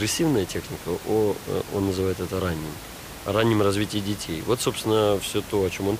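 No technical faults are audible.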